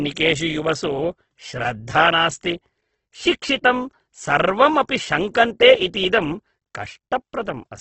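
From start to finish the speech sounds grainy and rough, with a hiss-like texture filling in where detail should be, and it is dull at the top. Nothing is present above 8.2 kHz. The likely cause is heavy Opus compression in its music (CELT) mode, at a rate that fits roughly 12 kbps. Bands are kept but filled with noise. On a spectrogram, energy stops flat at 8.2 kHz, and the bands below look smeared and speckled, with few clean gaps.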